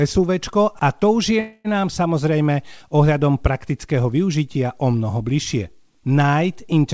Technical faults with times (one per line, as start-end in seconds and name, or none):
1.40-1.70 call audio freeze